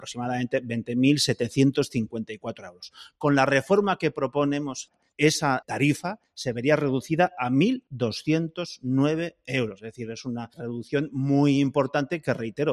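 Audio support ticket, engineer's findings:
Level pumping and flutter across the whole clip, held tones and tails sinking while attacks pass, swing of around 5 dB. Noise suppressor applied to music or sounds: speech-tuned suppressor still active, treating steady content and ambience as noise and gain-riding it down.

Sound ducked hard at 2.3–3.23 s (most of that span) and 4.86–5.2 s, deepest drop about 18 dB. Sound cut by the noise suppressor: same suppressor classing these stretches as noise and attenuating them beyond the general pumping.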